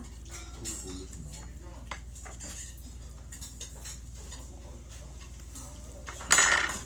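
From start to end the sound carries plainly audible Opus compression damage. Tones lose their clean edges and turn grainy and rough. A noisy wash sits where fine detail should be. There is little of the swirling, hollow quality of MP3. The cause is likely an Opus encoder in its music mode, keeping full bandwidth but short of bits. It fills starved bands with folded or noise content. This fits a rate near 24 kbps.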